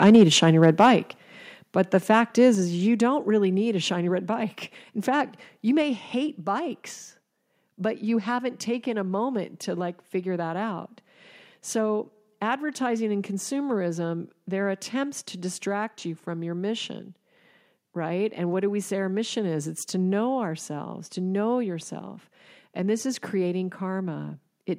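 Right at the start, from 0.03 to 0.88 s, there's microphone overload. The peaks run about 3 dB past the converter's limit, and a few percent of the samples get their tops sheared flat, so the loudest syllables carry a harsh, crackly edge. That's likely an input gain set too hot, driving the converter into its ceiling. It's only the opening second.

Then the microphone volume gets stepped down five times. Each step is an abrupt drop in the whole signal, speech and background together. The first comes at 0.16 s, about 2 dB, still inside the clipped stretch. The second, at 1.17 s, is about 5 dB. Another 5 dB drop lands at 2.55 s, between "the fact is" and "is you don't really". At 3.57 s there's a small 1 dB dip before "a shiny red bike", and a 2 dB one at 5.82 s, after "fact you" and before "hate bikes but you". The likely cause is the call software reacting to the early clipping by lowering the device's input gain one notch at a time.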